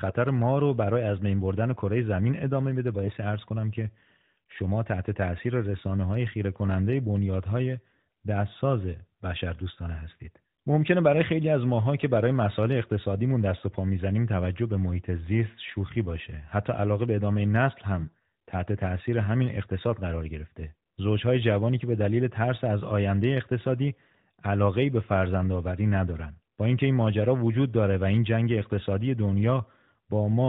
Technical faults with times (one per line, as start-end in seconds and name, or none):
17.99-18.14 AMR bit errors